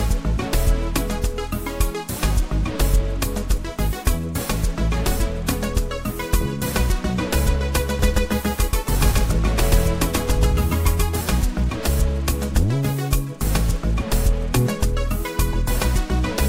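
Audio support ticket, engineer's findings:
Doubled audio track, 7.99 to 11.21 s. Likely a second capture path or an edit layering two out-of-step copies. Full-band duplicate trails by roughly 150 ms at about equal level: dry echo, no decay or room colour. Copy starts and stops abruptly at those boundaries, smearing each onset into a doubled attack.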